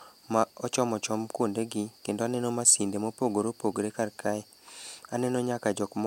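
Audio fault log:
No faults are heard anywhere in this speech.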